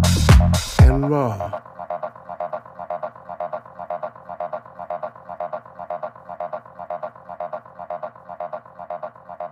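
Nothing stood out on listening; no technical problem could be heard anywhere in the audio.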